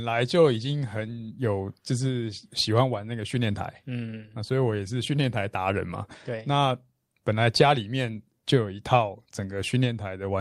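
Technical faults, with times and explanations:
Nothing stood out as a technical fault on listening to this speech recording.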